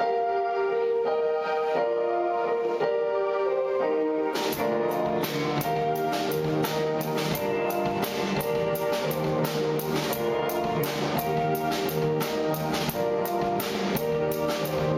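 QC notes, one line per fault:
No faults heard anywhere in this clip.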